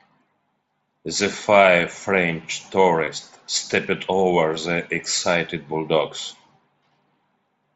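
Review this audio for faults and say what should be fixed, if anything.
Concealed Bluetooth headset packet loss at 1.32 s and 3.04 to 3.07 s, the second just before "stepped over the excited". Voice packets from the headset never reached the phone, so the receiver filled each gap by repeating the closest-matching slice of the preceding waveform. The 7.5 ms gap at 1.32 s, which fits one lost packet, is nearly hidden. The 30 ms run at 3.04 s, consistent with about four consecutive losses, sounds like a brief buzzy held tone with a slight warble as the real signal resumes. The wideband mSBC link around it carries audio up to 8 kHz. To prevent this, keep the headset close to the phone with a clear path and reduce 2.4 GHz interference from Wi-Fi and other radios.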